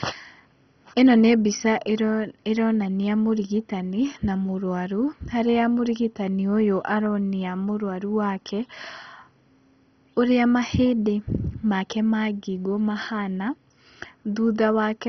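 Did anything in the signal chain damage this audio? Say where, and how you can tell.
Yes. The codec stage likely did it: the speech is dull throughout, with nothing above 6.1 kHz, plus a gurgling, granular texture. That's MP2 compression starved of bits, switching off upper sub-bands and coarsely quantising the rest, which fits roughly 32 kbps.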